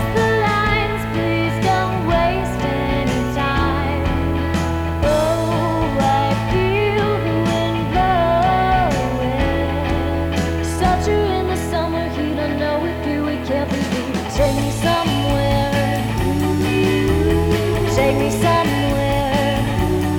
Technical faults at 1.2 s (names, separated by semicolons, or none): low bit depth without dither